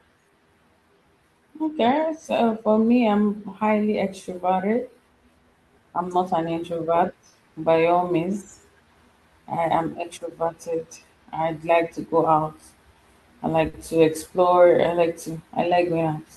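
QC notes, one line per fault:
throughout: clock drift between sender and receiver, sender's clock running roughly 3% slow, so the jitter buffer keeps draining and the receiver must stretch audio to keep pace.
0.30–12.95 s: repeated timing corrections, speech slowed to 97% by small repeated pieces adding roughly 300 ms overall.
13.70 s: short stall from a late packet just before "to explore I like", buffer ran empty and the last sound was held 40 ms, nothing lost.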